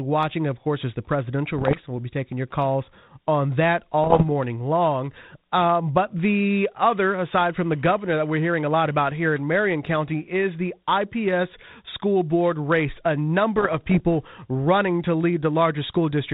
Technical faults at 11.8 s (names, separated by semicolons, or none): none